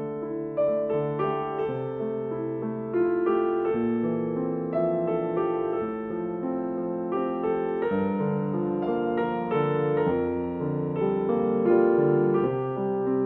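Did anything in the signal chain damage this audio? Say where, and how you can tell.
No, nothing damaged this audio.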